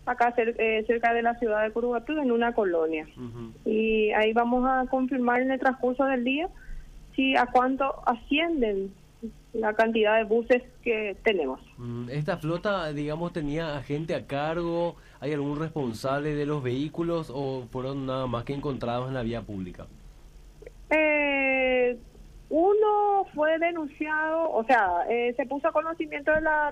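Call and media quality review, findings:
No faults found in this recording. Nothing heard that points to any component of the call or media path.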